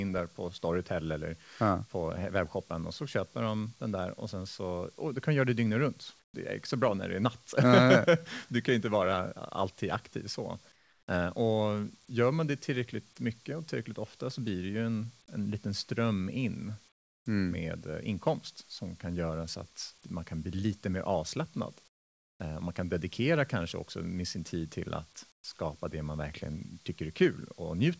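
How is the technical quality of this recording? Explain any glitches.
The recording is a speech clip with two kinds of fault, both typical of a voice call: the background is repeatedly replaced by synthetic noise in the pauses, and one word onset is cut short. The audio carries nothing above 8 kHz, as expected for a wideband call path.

Comfort noise in place of the background occurs five times: 6.20–6.34 s (between "göra det dygnet runt" and "är inte så bra"), 10.72–11.08 s, 16.92–17.26 s, 21.88–22.40 s (after "bli lite mer avslappnad"), and 25.32–25.44 s (between "sin tid till att" and "det man verkligen"). The likely cause is discontinuous transmission. The sender stopped transmitting in the gaps, and the receiver generated smooth, characterless noise instead. Each gap therefore drops in level, by about 7, 10, 25, 23 and 13 dB respectively.

An onset clipped by the voice detector appears at 25.42 s, right as the last comfort-noise gap ends. 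About 20 ms of the start of the sound is missing, so the sound begins abruptly, without its natural soft attack. This is likely the sender's speech detector reacting slightly late, leaving the first instant untransmitted and covered by comfort noise.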